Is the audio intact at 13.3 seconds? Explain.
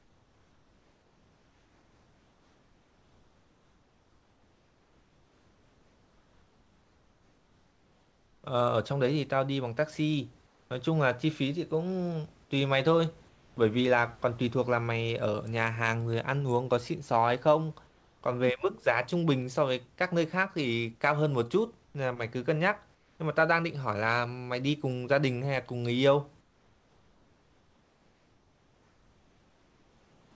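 No. Comfort noise in place of the background, 13.29 to 13.57 s: a flat, featureless hiss about 3 dB quieter, likely fill generated during a paused transmission.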